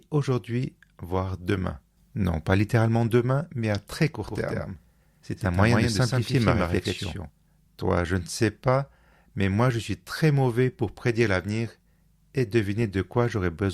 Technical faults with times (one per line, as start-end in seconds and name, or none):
4.28-7.30 doubled audio track
5.63-5.67 corrupt frame decoded